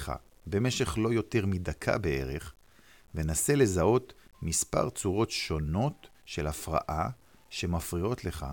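The whole clip has a grainy, signal-following grit, with quiet tails sputtering out. That's likely low bit depth without dither, sounding like around 9-bit truncation, with noise about 40 dB under the speech.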